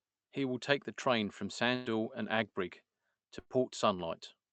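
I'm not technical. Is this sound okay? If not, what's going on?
No. Twice, a burst of packet loss hit the connection: a short run of the small chunks that carry the audio went missing. The receiver filled each hole by stretching the last sound and letting it fade. The first, from 1.75 to 1.92 s right after "take the train from", skips about 80 ms of speech. The second, from 3.39 to 3.57 s, skips about 40 ms.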